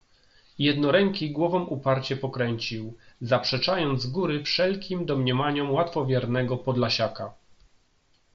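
Nothing in this speech recording stood out as a technical fault on listening.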